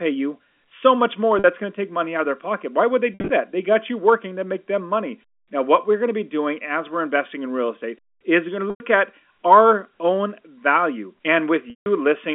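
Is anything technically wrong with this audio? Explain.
Yes, there is packet loss with pitch repetition in this speech, at 1.39–1.44 s, 3.14–3.30 s, 8.7–8.8 s and 11.70–11.86 s, about 50, 120, 100 and 160 ms lost. The receiver loops the last pitch period to fill each gap, which fits 10 ms packets. The short gaps sound like a held buzz. The longer ones fade to silence, and the losses at 3.14 s are scattered over 160 ms, with the longest run 60 ms. Unlike plain dropouts, none of these gaps opens as a hard click or a sudden silence. The telephone-band coding, 250–3400 Hz, can be heard as a narrow line sound.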